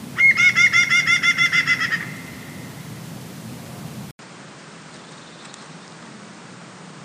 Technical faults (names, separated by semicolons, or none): input switched to a poorer device